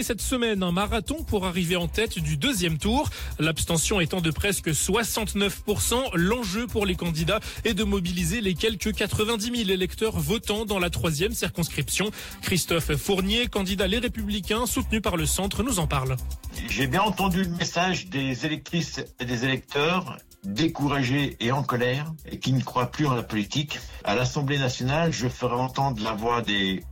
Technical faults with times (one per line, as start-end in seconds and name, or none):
none